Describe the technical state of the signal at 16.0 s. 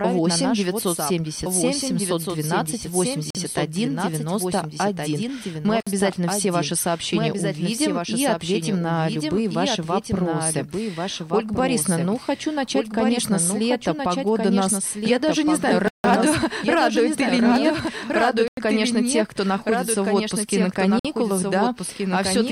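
At 16.0 s the playback is inside a Bluetooth stall running from 15.88 to 16.04 s. Radio interference likely held up the wireless packets, so the headphones' buffer emptied and output paused until resent data arrived. The result is a hard drop to silence lasting about 159 ms, after which the sound resumes, with no fade in or out around the gap.

Underneath that, the whole clip carries a doubled audio track, likely from the signal being captured a second time through a slower path and mixed back in. A second full-band copy trails the original by about 1.5 seconds at roughly 5 dB quieter. It sounds like a distinct, dry repeat rather than reverb, with no decay or room colour, so each event is heard twice, the second time softer.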